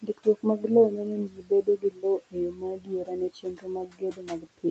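Speech cut by the noise suppressor appears from 0.02 to 0.71 s and again from 0.89 to 4.65 s. The suppressor mistook parts of the speech for noise and turned them down by up to about 17 dB and 19 dB, leaving swallowed, faint syllables.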